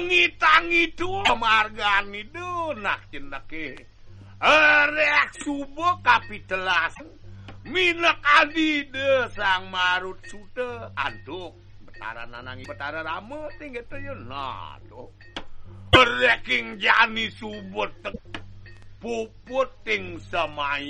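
The audio has damaged data in a compressed stream at 1.22–1.30 s, 6.91–7.01 s, 12.61–12.66 s, 15.92–15.97 s and 18.09–18.19 s. Each disturbance lasts between 44 and 96 ms. Corrupted bytes made the decoder misread frames and lose sync until it found the next frame header.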